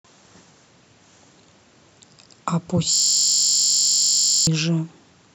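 From 2.94 to 4.47 s, a system hang loop: the stalled driver replays one 21.33 ms buffer, a steady 46.9 Hz buzz, unlike a dropout.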